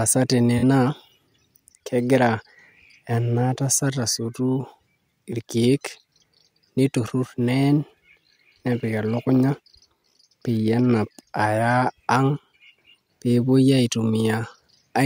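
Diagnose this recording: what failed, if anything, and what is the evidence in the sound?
AAC frame loss with concealment, 0.58 to 0.63 s, at the codec stage: a roughly 43 ms patch of speech turns smeared and noisy. The decoder rebuilt the missing span, which fits two lost AAC frames, from the last good spectrum instead of real data.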